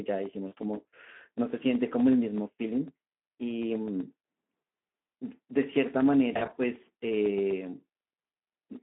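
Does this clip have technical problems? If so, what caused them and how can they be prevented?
Yes. The whole clip has passed through the Speex codec at a low-to-middle setting, consistent with about 11 kbps. With so few bits for the excitation signal, the decoder rebuilds the speech only roughly, so it sounds plainly hoarse and noisy with a grainy edge. The line is also narrowband, limited to roughly 200 Hz to 3.4 kHz, which makes it thin and muffled. Running Speex in wideband mode at a higher quality setting, or using a modern codec such as Opus, would prevent this.

VoIP packet loss concealed by the speech codec appears twice. From 0.47 to 0.54 s about 40 ms of audio went missing, which fits two lost 20 ms frames. From 6.33 to 6.58 s roughly 140 ms was lost in scattered gaps over about 240 ms, the longest being 40 ms. Each time, the decoder extended its last pitch and filter state at falling gain, so the sound smears and fades, and stays weak briefly after audio resumes. 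A larger jitter buffer, forward error correction or packet redundancy on the network path would prevent these dropouts.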